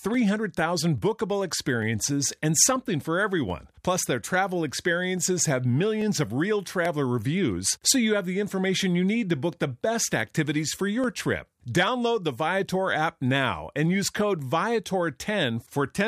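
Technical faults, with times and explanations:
0.14 to 16.07 s, clock drift buffer slips: a buffer between two devices, likely on clocks a few hundred ppm apart, drops or repeats a small block every 0.84 s, giving about twenty regular clicks through the speech.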